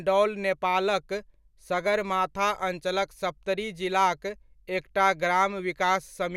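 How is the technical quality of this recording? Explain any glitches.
No glitches or technical faults can be heard here.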